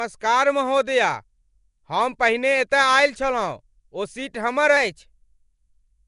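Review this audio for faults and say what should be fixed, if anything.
Nellymoser compression runs through the whole clip: the speech carries a rough, hissy halo and a smeared, underwater quality, with nothing above 10.6 kHz. The likely cause is Flash-era Nellymoser Asao coding, which starves weak bands of bits and fills them with noise, fitting a rate around 44 kbps. Re-export from the original recording with a modern codec at an adequate bitrate.

A drift correction step begins at 4.77 s, just after "ओ सीट हमर", and lasts to the end. Playback suddenly runs about 5.7% faster and rises 96 cents, nearly a semitone. The likely cause is clock-matching software changing the rate in one jump to rebalance its buffer. Use gradual resampling or a shared clock so the rate never changes in a single step.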